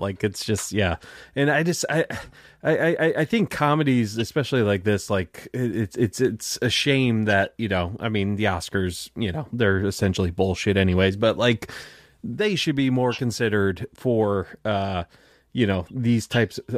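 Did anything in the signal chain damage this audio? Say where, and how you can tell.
No, nothing in the signal chain damaged this audio.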